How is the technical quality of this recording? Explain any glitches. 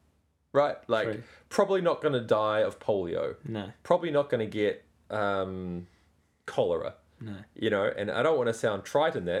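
No technical faults are audible anywhere in this recording.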